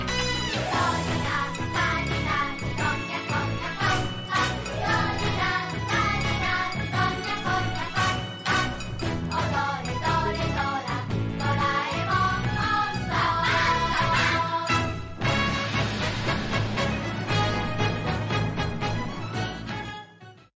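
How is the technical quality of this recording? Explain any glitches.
Nothing here catches the ear as a glitch: there are no dropouts, clicks or sudden jumps anywhere in the recording.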